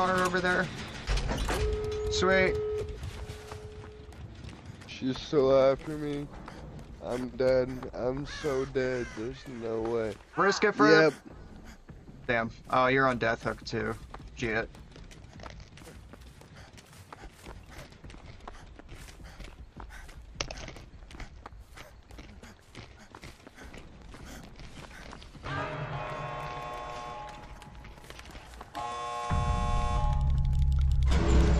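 No audible technical faults anywhere in this recording.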